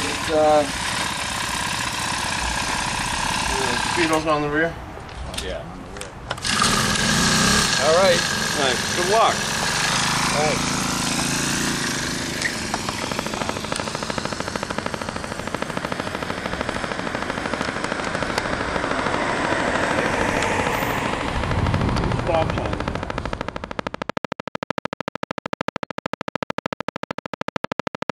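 A train of clicks runs from 13.04 s to 28.11 s, roughly two hundred near-identical pulses arriving at a steady 13.2 per second. Each click stands well above the surrounding sound, around 20 dB louder, so the ticking dominates and stays audible through quieter stretches and gaps alike. The even spacing points to a periodic disturbance, likely electrical interference from nearby equipment or a faulty connection or power supply.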